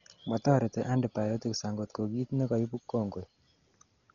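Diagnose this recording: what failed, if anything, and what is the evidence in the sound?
Codec stage, throughout. The speech sounds dull, with nothing above 7.1 kHz. A rough, fluttering noise surrounds voiced tones. The likely cause is heavy Dolby Digital compression, which fits a bitrate near 40 kbps. Many frequency lines got no mantissa bits, so the decoder filled them with noise.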